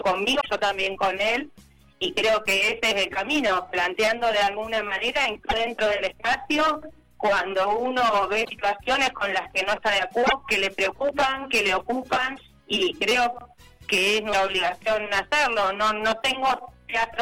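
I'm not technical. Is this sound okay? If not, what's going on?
No. Six times, the sound skips ahead and a brief chirp, burst of noise or short gap takes its place: at 0.40, 5.49, 8.44, 10.26, 12.35 and 14.32 seconds. Each glitch lasts only about 0.03 to 0.06 seconds. The likely cause is a broken MP3 bit reservoir. MP3 files lend each chunk of sound some storage space in the chunk before it. When chunks go missing, the next one reads the wrong bytes and plays garbage.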